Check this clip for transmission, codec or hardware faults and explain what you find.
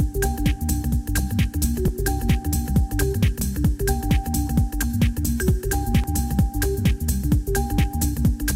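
Four short skips point to a likely dropped buffer (overrun) at 1.88, 3.41, 4.83 and 6.04 s: the capture side did not read its samples before the hardware wrote over them, so a slice of audio vanished and the edges were spliced together. Each spot is a sudden jump forward rather than a gap. Three lose around 20 ms; the jump at 3.41 s is larger, around 50 ms.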